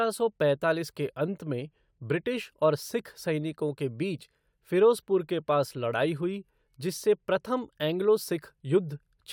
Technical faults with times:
none

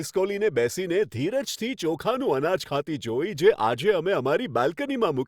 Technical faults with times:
none

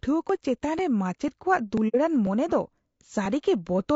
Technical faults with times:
0.00-3.95 low-delay AAC compression
0.29 audio missing between chunks
0.79 audio missing between chunks
1.28 audio missing between chunks
1.77 audio missing between chunks
1.88-1.96 AAC frame loss with muting
2.27 audio missing between chunks
2.76 audio missing between chunks
3.26 audio missing between chunks

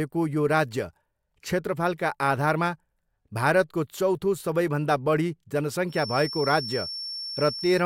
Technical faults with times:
5.86-7.85 feedback whistle

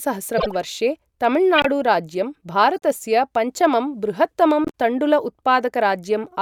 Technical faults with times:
0.38-0.55 corrupt frame decoded
1.56-1.66 corrupt frame decoded
2.74 corrupt frame decoded
4.64-4.70 corrupt frame decoded

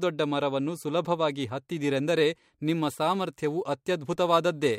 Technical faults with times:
2.66-4.79 crude rate conversion

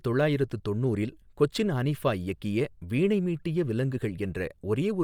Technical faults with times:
0.00-5.04 Bluetooth LC3 compression

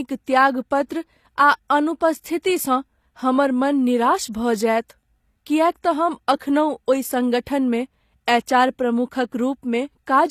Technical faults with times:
0.00-10.30 HE-AAC compression

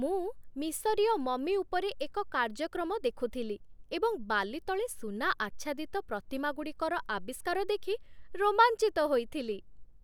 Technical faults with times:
none

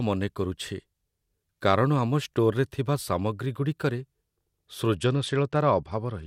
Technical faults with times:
4.95-6.27 Bluetooth SBC bit pool drop

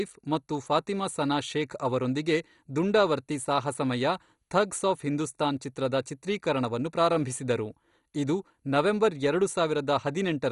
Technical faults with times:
0.00-10.51 MP2 compression

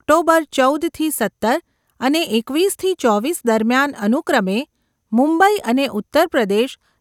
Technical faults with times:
none

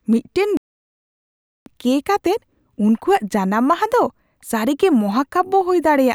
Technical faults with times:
0.57-1.66 playback stall

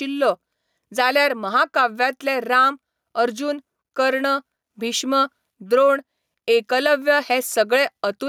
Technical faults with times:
0.00-8.28 gain pumping

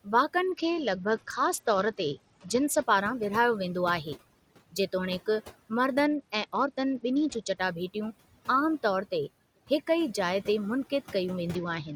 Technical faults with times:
0.00-11.96 overdone noise removal
0.00-11.96 noise suppressor artifacts
0.44-2.82 Bluetooth SBC bit pool drop
6.05-7.58 Bluetooth SBC bit pool drop
11.55-11.96 Bluetooth SBC bit pool drop

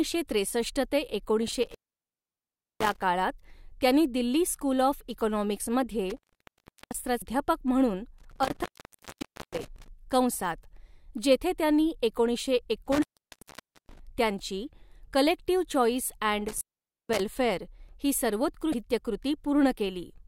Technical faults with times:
1.51-3.03 intermittent contact
6.10-6.99 intermittent contact
7.19-7.22 damaged data in a compressed stream
8.18-9.88 intermittent contact
9.62-9.65 damaged data in a compressed stream
12.86-14.00 intermittent contact
16.48-17.20 intermittent contact
18.71-18.74 damaged data in a compressed stream

